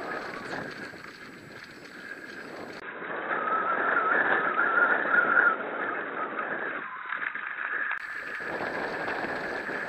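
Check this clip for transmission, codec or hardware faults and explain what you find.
One fault is present. From 2.80 to 8.00 s the sound drops out for about 20 ms, then returns dull and boxy with nothing above 3.8 kHz, a level shift of roughly 5 dB, and a new noise floor about 35 dB down. This is likely an input switched to a poorer, narrower-band device.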